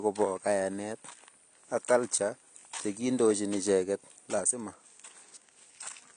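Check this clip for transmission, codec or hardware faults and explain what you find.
One fault runs through the whole clip: AAC compression damage, and it is plainly audible. Nothing reaches above 9.8 kHz. The speech sounds dull and smeared, with a warbling, fizzy edge on sibilants and held sounds. The likely cause is a low-bitrate AAC-LC encode, which fits about 32 kbps. At that rate the encoder cuts the top end and coarsely quantises what remains.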